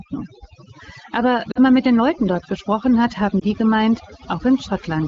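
Speech carried over an AMR wideband (HD Voice) link, and the light coding sounds consistent with one of the mid-to-upper rate modes. The speech is also marked by overdone noise removal across the whole clip. The suppressor's noise estimate was set too aggressively, so individual frequency bands are pulled down or gated whenever they come close to that threshold. This drops the background and breaks it up into twinkling specks of residual noise. Quieter parts of the speech are removed along with the noise. There are also two episodes of lost AMR speech frames. The first runs from 1.52 to 1.59 s, just before "man mit den", and lasts about 40 ms, which fits two missing 20 ms frames. The second runs from 3.39 to 3.44 s, between "dort gesprochen hat haben" and "die gemeint", and fits a single missing frame. In both cases the decoder covers the gap by repeating the last good pitch and vocal-tract parameters at reduced gain, which produces a short dip or warble for the single lost frame and a drop toward near silence for the pair, before normal decoding resumes.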